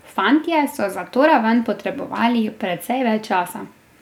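Dropped samples at 0.54 s: a single sharp click cuts through the speech at this point, showing as a thin vertical line across the whole spectrum. The likely cause is that roughly one sample went missing from the stream, so the waveform jumps abruptly from one value to a later one instead of moving smoothly between them. The gap is far too brief to remove any audible sound; what remains is only the tick of that discontinuity.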